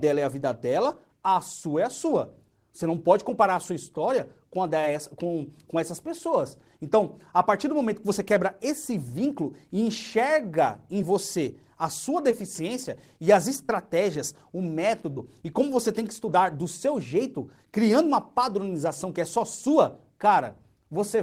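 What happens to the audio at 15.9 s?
Nothing goes wrong at 15.9 s; the audio carries on intact through that moment with no dropout, click or distortion.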